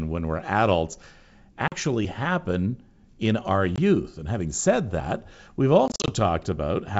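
Hard-edged silent holes at 1.68–1.74 s, 3.76–3.79 s and 5.88–6.11 s mark packet loss on an ADPCM call. Unlike a plain dropout, each return is slightly distorted while the decoder's predictor and step size regain step with the sender's. The last is scattered gaps.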